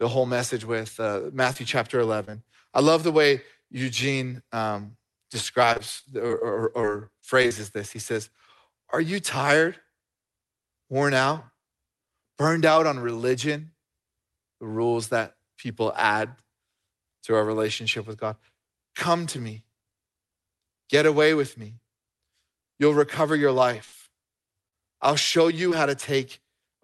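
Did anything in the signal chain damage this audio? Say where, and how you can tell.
Yes. All of the damage happened at the network and jitter-buffer stage of the call, where audio failed to arrive in time.

Short concealed packet loss occurs at 1.53–1.57 s, 2.25–2.29 s, 2.31–2.35 s, 24.68–24.74 s and 25.70–25.73 s. Each is a brief smear or wobble lasting a few hundredths of a second. About 20 ms of audio went missing each time, and 40 ms at 24.68 s, which fits 20 ms packets. The receiver filled each hole by extending the preceding sound, then crossfaded back into the real signal. A short consonant can vanish inside one of these.

Repeated packet loss (robotic sound) affects 5.73–6.43 s and 6.81–7.53 s. Each stretch has five separate holes, up to 40 ms long in the first and 25 ms in the second. Concealment covers roughly 17 and 13 percent of those spans. Because a new gap arrives before the previous patch has settled, the sound turns choppy, with fragments missing. 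That stuttering texture, rather than a single glitch, shows the loss was recurring.

A burst of packet loss hits at 23.85–23.94 s, where about 80 ms in a row never arrived. The receiver kept extending the last sound while fading it down, so you hear a held buzz or a decaying hiss, and then the audio picks up further on with the middle part simply gone. The continuous fill, rather than silence, shows concealment was active. Throughout, the Opus coding at about 32 kbps limits the band to around 12 kHz.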